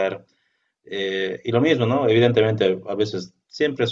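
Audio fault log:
No technical fault can be heard anywhere in the speech recording, and the signal holds steady in level and continuity throughout.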